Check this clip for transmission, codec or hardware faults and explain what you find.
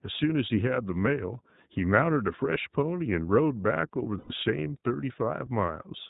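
The speech carries two faults: iLBC codec coding throughout, and a burst of lost iLBC frames late in the clip.

The iLBC codec damage is plainly audible across the whole clip. Each short frame is coded independently, and the texture fits the 15.2 kbps, 20 ms mode. Nothing passes above 4 kHz, so the spectrogram is a hard ceiling there, and the speech sounds slightly rough and synthetic.

Lost iLBC frames occur from 4.18 to 4.31 s, about 120 ms of missing audio. The decoder repeats the last pitch cycle blended with noise, giving a held, faintly buzzy vowel. It shows as flat, repeated harmonics on a spectrogram and a uniform periodic waveform, with clean recovery immediately afterward.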